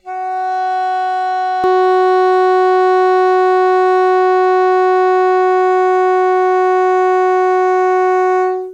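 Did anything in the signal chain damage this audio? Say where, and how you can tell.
Yes. From 0 to 1.64 s the music sounds hollow: channel delay (comb filtering) at the buffer or mono-sum stage. One channel lags around 1.5 ms, carving fixed, evenly spaced notches from about 300 Hz upward, not sweeping ones.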